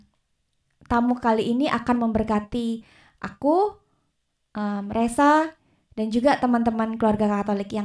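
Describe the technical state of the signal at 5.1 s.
At 5.1 s the signal is intact, with no audible fault at that point in the speech.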